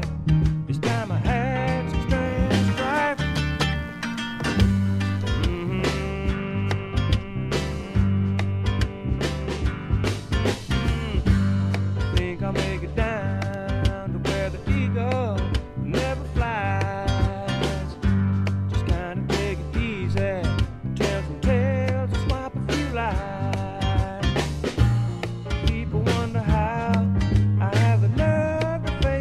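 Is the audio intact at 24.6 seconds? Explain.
Yes, the audio is intact at 24.6 seconds, with no dropout, glitch or other fault at that moment.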